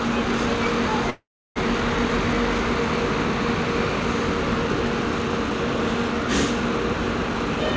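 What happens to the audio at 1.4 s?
At 1.4 s the sound is in a call audio freeze lasting from 1.10 to 1.58 s, likely because delayed packets emptied the jitter buffer. A fading continuation gives way to about 0.31 s of silence. Unlike a dropout, nothing is lost: the audio resumes where it stopped, about 0.46 s late.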